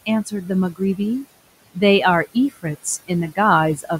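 Noise suppressor artifacts run through the whole clip. The suppressor pulls the room noise down by about 19 dB between phrases, then lets it back up under the speech. That noise sits about 19 dB below the voice.

Speech cut by the noise suppressor happens twice, at 0.26 to 0.5 s and at 0.72 to 0.99 s. Each time, the suppressor mistakes quiet speech for noise. It drops it by up to about 11 dB, then about 16 dB. Roughly a tenth of a second each time sounds swallowed and faint.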